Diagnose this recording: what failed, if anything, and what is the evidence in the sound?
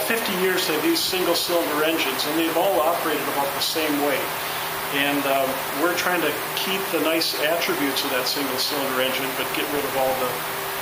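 The failure is low bit depth with noise shaping, at the sample-format conversion stage. It is present for the whole clip. A steady, thin hiss sits under the sound from start to finish. It climbs strongly toward the top of the band. The hiss sits only about 10 dB below the signal. That fits a word length cut to 6 bits. The rounding error is fed back and pushed upward in frequency, hence the bright tilt.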